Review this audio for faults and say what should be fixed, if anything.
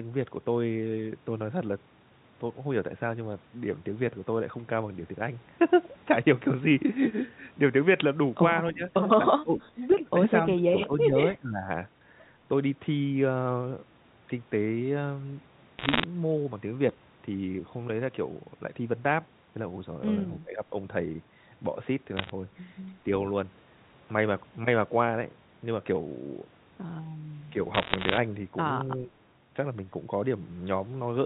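The speech level dips sharply at 8.73–8.83, 9.27–9.80, 10.54–11.17, 11.34–11.68, 20.39–20.63 and 28.97–29.11 s. The drops reach about 10 to 25 dB. This is likely speech suppressed in double talk, with the echo canceller turning down the talker along with the loudspeaker echo. Better double-talk detection would keep the talker audible.

At 9.92–9.97 s a faint delayed copy of the voice returns. It lags by 272 ms and sits about 25 dB below the speech. This is likely an echo leak from a loudspeaker endpoint whose canceller missed some echo. Tighter echo cancellation or a headset would stop it.

Crackle and sharp ticks sit over the speech at 15.78–16.04, 22.17–22.30 and 27.74–28.17 s. These are bit errors on a digital phone line, at a rate near 1 percent. Each flipped bit corrupts one G.711 sample, and the telephone band itself stays intact. A cleaner transmission link would prevent them.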